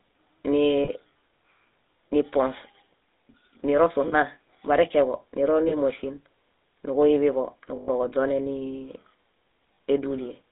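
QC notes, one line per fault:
Throughout: GSM full-rate codec. The sound is confined to roughly 250 Hz to 3.7 kHz with a plainly audible buzzy, gravelly roughness. This comes from a pulse-driven vocal-tract model that keeps only sparse excitation, which fits a 13 kbps full-rate coder.
0.84–0.98 s, 4.08–4.15 s, 5.68–5.74 s, 7.76–7.90 s, 9.74–9.78 s: lost GSM frames. Gaps of 20 to 120 ms are bridged by repeating the last good frame, giving a brief metallic ring. The longest, at 7.76 s, loses six frames.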